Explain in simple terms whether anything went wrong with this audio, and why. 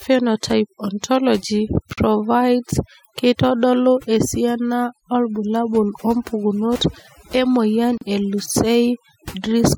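The background sounds near-silent, broken up into twinkling specks. That is overdone noise removal: a cleanup tool set too strong also stripped quiet parts of the voice.

Brief silences cut into the speech at 1.93 s, just before "provides keitodolu esiana obulabul", and at 7.98 s, just after "esiana obulabul wompukunot emoyian". Each lasts about 40 milliseconds, and then the speech resumes where it stopped. These are gaps at a join of encoded pieces: separately encoded sections, six seconds apart, were stuck together with their built-in silent padding left in.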